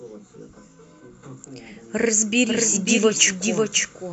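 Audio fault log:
2.47–4.12 s, doubled audio track: from 2.47 s to the end, a second full-band copy of the speech sits about half a second behind the original and a few dB quieter. It enters abruptly and has no decay or room colour, so it sounds like the same material played twice out of step, not like an echo. The likely cause is the signal being captured again through a slower path, or an edit that leaves two offset copies.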